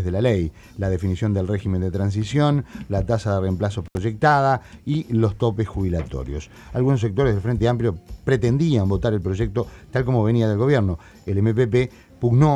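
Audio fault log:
3.86–3.97 s, intermittent contact: a loose connection opens for about 71 ms, so the sound cuts out, leaving faint hiss, with crackle where the contact breaks and remakes. That crackle at both edges is what separates it from a clean digital dropout.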